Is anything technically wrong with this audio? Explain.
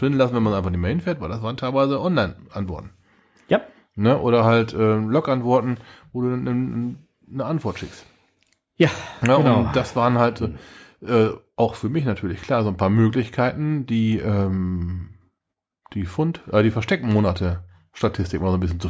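No, nothing technically wrong here.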